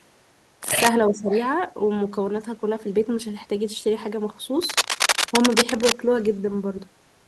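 Speech with two bursts of cable scratch noise, at 0.63 to 0.90 s and again from 4.62 to 5.92 s, the second about as loud as the voice. The harsh, uneven rustling is likely from a worn cable or connector being moved. On a spectrogram it shows as dense broadband speckle, and on the waveform as ragged spiky fuzz over the speech. Echo leak appears at 1.08 to 1.13 s and 1.31 to 1.48 s. A copy of the voice trails it by 344 ms, fairly quiet in the first scrap and faint in the second, likely from a loudspeaker echo the far end's canceller missed. A spectrogram shows it as a ghostly repeat of earlier speech harmonics, shifted a third of a second later. Starting within the first scrap and running up to the second, from 1.10 to 1.31 s, there is speech suppressed in double talk. The voice dips noticeably for about a fifth of a second, likely while the echo canceller fights both sides at once. It appears as a pinched notch in the waveform envelope.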